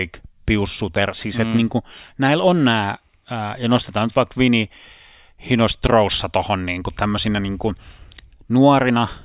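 Nothing in the speech stood out as a technical fault on listening.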